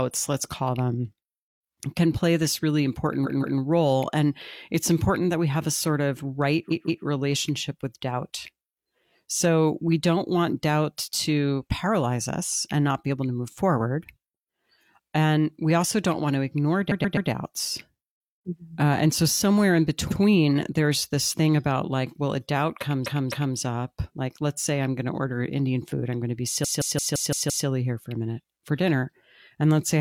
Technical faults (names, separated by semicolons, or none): repeated frames